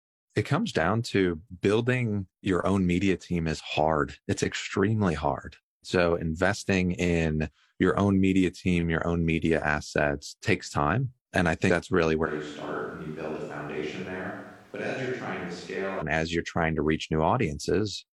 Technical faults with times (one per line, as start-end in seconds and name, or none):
6.15 dropped samples
12.27-16.00 switch to a distant microphone